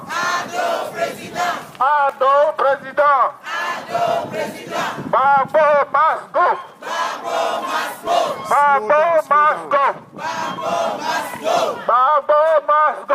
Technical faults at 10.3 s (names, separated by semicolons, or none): none